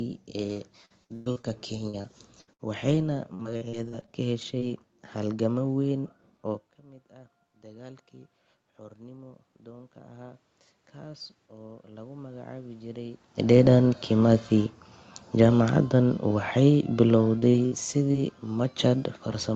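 From 0.53 to 4.72 s, repeated packet loss (robotic sound) leaves 19 gaps, the longest 122 ms, covering about 17% of the span. Each gap is patched by stretching the previous sound, so the audio turns choppy with pieces missing, and a spectrogram shows smeared, repeated frames between ragged breaks.

Automatic gain rising follows at 7.10–10.48 s, after the input drops about 20 dB. The gain climbs about 6 dB and voice and room noise swell together, seen as a slowly widening waveform envelope.

A second automatic gain rising of about 6 dB runs from 11.03 to 13.91 s, again lifting the background along with the voice.

From 14.12 s to the end, automatic gain falling pulls the level down gradually, and the waveform envelope and the noise floor shrink together.

Inside that fall, from 17.40 to 18.22 s, repeated packet loss returns with 4 gaps, the longest 57 ms. It sounds briefly choppy and shows short smeared patches on a spectrogram.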